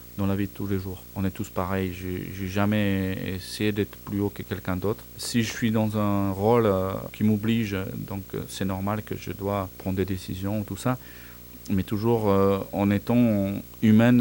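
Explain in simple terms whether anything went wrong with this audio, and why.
Video or display buzz runs under the speech for the whole clip. A screen or video cable is leaking into the audio, adding a low buzz at about 60 Hz, the picture's refresh rate, a very high whine near 15.7 kHz, and a gritty hash.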